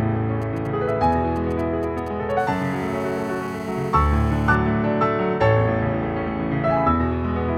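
From 0.42 to 2.32 s you get GSM signalling bursts, a galloping dit-dit-dit of short 217 Hz buzzes, well down under the sound, from a nearby 2G phone's intermittent transmissions being rectified. Then from 2.39 to 4.55 s it settles into steady GSM phone buzz, a raspy 217 Hz tone full of harmonics about 20 dB below the signal, as the phone transmits in bursts 217 times a second during a call.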